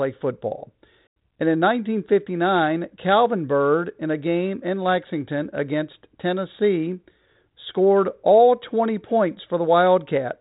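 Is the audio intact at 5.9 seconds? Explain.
Yes, the speech is intact at 5.9 seconds, with no fault at that moment, only the narrow telephone band of G.726 ADPCM at 32 kbit/s, which passes nothing above about 3.8 kHz.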